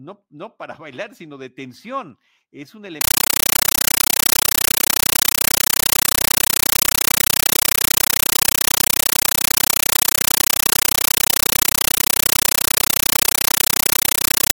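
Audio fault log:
3.01 to 14.55 s, compressed stream played as audio: the speech turns into loud, chattering static. Undecoded AC-3 data is played as raw samples, giving 9.33 ms noise bursts 31.25 times a second.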